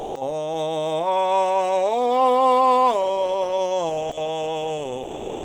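The music is missing from 0.00 to 0.13 s and again from 5.05 s to the end at 5.44 s, where comfort noise replaces it. This is sound dropped by the voice detector, likely Opus DTX treating music as background. On a spectrogram, both gaps show flat, featureless fill in place of the music.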